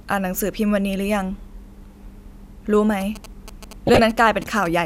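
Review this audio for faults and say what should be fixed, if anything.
From 3.01 to 4.67 s a galloping dit-dit-dit of short buzzes sits about 15 dB under the speech, with the buzz at 217 Hz. These are GSM signalling bursts: a 2G phone close to the recording chain was exchanging brief groups of control bursts with the network. Some stage in the audio circuit rectified that radio energy and turned the burst envelope into audible clicks and buzz. To prevent it, keep phones well away from microphones, cables and preamps, or switch them to flight mode while recording.

From 3.87 to 3.99 s, overlapping the buzzing, a short burble of noise blips breaks across the speech. This is DAB burbling. Weak reception let a small fraction of bit errors slip past the error correction into the MP2 audio, and the length points to a handful of consecutive frames being corrupted. Bad samples put short blips of noise into single sub-bands, and bad scale factors make sub-bands jump in level for up to a frame. 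To prevent it, improve the DAB signal with a better-placed or higher-gain antenna, or take the feed from a wired source.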